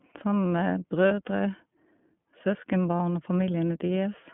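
The whole clip carries the iLBC codec: speech squeezed into a 150 Hz to 3.4 kHz phone band, plainly rough and synthetic, which fits iLBC's 13.33 kbps mode with 30 ms frames. At 1.08 s and again at 2.97 s there are lost iLBC frames, each a 30 ms dropout the decoder patches by repeating the last pitch cycle. You hear a brief buzzy held vowel before the speech snaps straight back.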